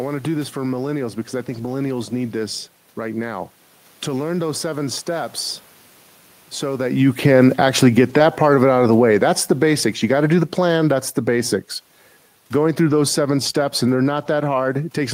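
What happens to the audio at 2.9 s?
Nothing goes wrong at 2.9 s: the speech continues intact there, with only the background noise of the room beneath it.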